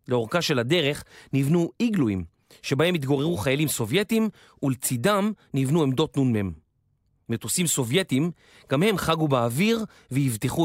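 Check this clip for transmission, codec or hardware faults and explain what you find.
Nothing turned up here: the speech comes through without any transmission, codec or hardware trouble worth pointing out.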